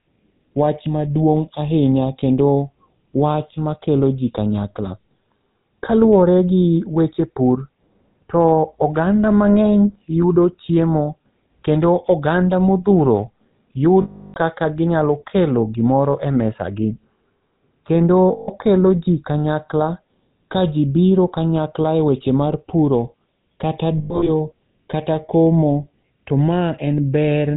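The whole clip has the GSM full-rate codec on it, and the damage is plain. It fits a 13 kbps stream that models the vocal tract and feeds it sparse, evenly spaced pulses, so the speech comes out buzzy and gravelly with nothing above 4 kHz.

Then there are lost GSM frames at 14.02 to 14.37 s, 18.32 to 18.49 s, and 23.98 to 24.29 s. Each gap is filled by replaying the last good frame, which gives a metallic ring. The first gap runs 340 ms. The third is broken losses spread over 280 ms, with the longest run around a tenth of a second.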